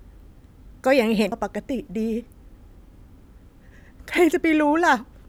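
At 1.31 s the speech is hit by a CD skip: a knock or surface flaw threw the laser onto another turn of the disc's spiral, so playback mutes for a few milliseconds and resumes elsewhere in the recording. It is heard as a brief tick followed by a discontinuity in the speech. A plain dropout or digital click would leave the surrounding sound in its original order, but here it jumps to a different point.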